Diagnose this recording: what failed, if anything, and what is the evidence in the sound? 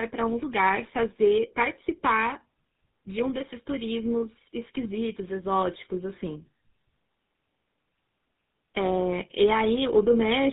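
Tandem speech coding at the codec stage: throughout, the speech sounds rough, muffled and warbly, with nothing above 3.8 kHz, consistent with GSM full rate coding applied twice in a row.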